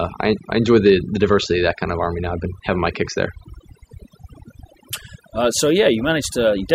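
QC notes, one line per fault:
Throughout, overdone noise removal: the denoiser was clearly pushed way too hard on this speech. Any frequency band sitting close to what it thought was noise got pulled right down or shut off, and the softer bits of the voice got swept out along with it. So the background drops, with little twinkly specks popping in and out.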